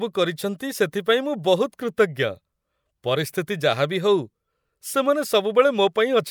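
No technical faults can be heard anywhere in the speech, so there are none to describe.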